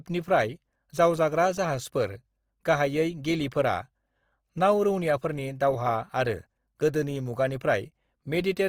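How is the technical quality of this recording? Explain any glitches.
The recording has plainly audible compression damage from start to finish. The speech sounds grainy and rough, with a noisy, sandpapery texture on voiced sounds, while the full bandwidth stays open. The likely cause is Opus compression in its music (CELT) mode. Starved of bits, the encoder preserves each band's overall energy but refills the detail with folded copies of lower bands or noise, which fits a low bitrate of about 24 kbps.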